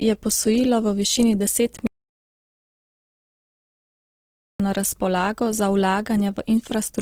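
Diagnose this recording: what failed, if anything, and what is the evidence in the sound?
At the codec stage, the speech has a rough, grainy texture throughout, with audible damage, while content extends up to about 20.4 kHz. That combination is likely Opus compression in its music mode at a low rate, around 16 kbps, filling starved bands with noise.

An audio dropout to silence runs from 1.87 s to 4.60 s, about 2.73 s of dead silence with no room tone. The abrupt cut and return point to lost input upstream, with the recorder writing silence until the signal resumed.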